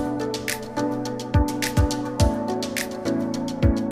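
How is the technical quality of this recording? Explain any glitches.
Nothing here trips the ear: no glitches, dropouts or odd artefacts anywhere in the recording.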